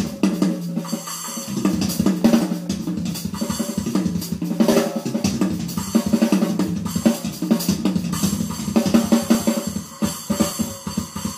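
A regular click runs through the sound from about 1.25 s to 10.51 s. It repeats every 1.16 s, roughly ten times in all. The steady spacing points to clock drift buffer slips. Two devices likely run on separate clocks that disagree by several hundred parts per million. The buffer between them slowly drifts until a small block, around thirty samples, is dropped or repeated. Each slip breaks the waveform and is heard as one click.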